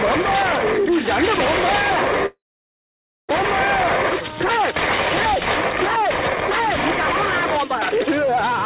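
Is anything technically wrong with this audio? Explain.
Yes, there are two kinds of fault, heard through a telephone-band call path whose G.711 mu-law coding leaves nothing above 4 kHz.

Long network dropout, 2.26 to 3.33 s: the sound turns into a fading buzz or hiss, then about 0.9 s of silence, and resumes with roughly 0.6 s of material lost. This is likely a long network dropout, where packets stopped arriving and the receiver concealed the gap.

Jitter buffer speed-up, 4.10 to 4.73 s and 7.58 to 8.46 s: the audio runs fast at unchanged pitch, 113% in the first stretch and 104% in the second. The buffer held more audio than it aims for. The receiver cut repeated pitch-period slices, roughly 100 ms and 40 ms in total, so the first passage sounds hurried.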